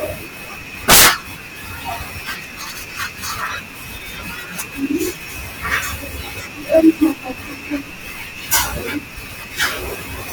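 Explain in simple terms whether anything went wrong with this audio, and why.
Integer overflow at 0.90 to 1.09 s and again at 8.54 s: the speech got louder than the numbers storing it could hold, so instead of being capped the peaks wrapped around to the opposite extreme, causing harsh, sudden cracks much sharper than ordinary distortion.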